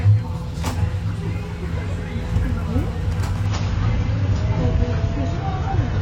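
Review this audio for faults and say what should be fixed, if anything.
From 3.46 s to the end at 6.02 s, the adaptive stream drops to a lower bitrate. Treble above 7.1 kHz vanishes and codec artefacts thicken, consistent with a switch from about 96 to 24 kbit/s AAC. Unlike a dropout, the quality changes abruptly with no gap. To prevent it, buffer more ahead or cap the lowest bitrate rung higher.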